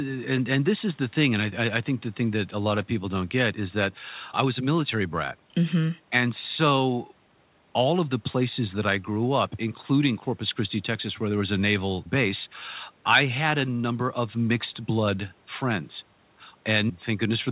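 No technical faults can be heard in the speech, which has the narrowband telephone character of a call path with nothing above 4 kHz, consistent with G.711 A-law coding at 64 kbps.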